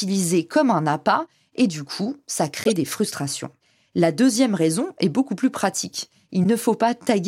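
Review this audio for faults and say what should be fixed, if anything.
Three bursts of corrupt frame decoded show up in the speech: at 2.64 to 2.77 s, at 4.31 to 4.36 s, and at 6.44 to 6.46 s. The first is loudest, reaching about -5 dBFS. Damaged frames were decoded as if valid, so wrong gains and misread codes push energy into the wrong frequencies and produce squeaky, noisy blips. Unlike concealed packet loss, which smears or mutes the sound, these add new, unrelated spectral content. Prevent it by checking frame integrity, with a CRC or checksum, and concealing bad frames instead of decoding them.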